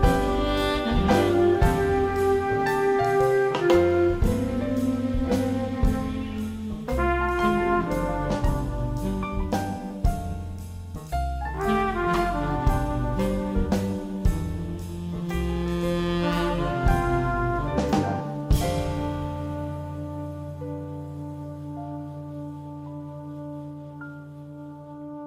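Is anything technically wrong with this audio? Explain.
No, nothing technically wrong can be heard in this audio. There is no sign of trouble in how it was captured, processed or delivered.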